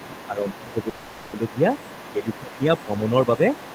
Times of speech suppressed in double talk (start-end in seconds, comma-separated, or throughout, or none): 0.00-1.68, 2.12-3.46